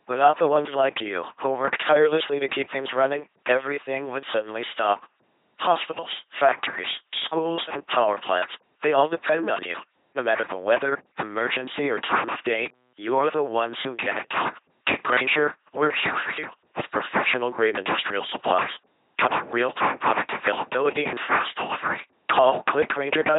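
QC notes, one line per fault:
Throughout, LPC-10 vocoder: heavy buzzy, robotic speech with nothing above 3.8 kHz. A ten-pole filter driven by pulses or noise fits a 2.4 kbit/s LPC-10 coder.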